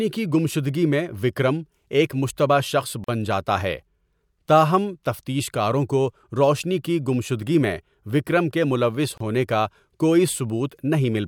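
At 3.04 s a gap at a join of encoded pieces cuts into the speech for about 42 ms, right after "وکرم ایک مشتبہ شخص". The speech resumes with "جاتا ہے". A second gap opens at 9.18 s and lasts about 29 ms, just before "ہونے کا کوئی". Each piece was encoded on its own and joined untrimmed. The encoder's start-up silence and end padding stayed in. The result is a brief dropout with smeared edges.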